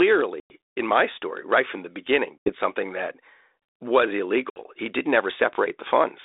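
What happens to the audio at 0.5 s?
Packets dropped on the ADPCM call from 0.40 to 0.52 s. About 100 ms goes abruptly silent, then "in my story right" resumes with brief distortion.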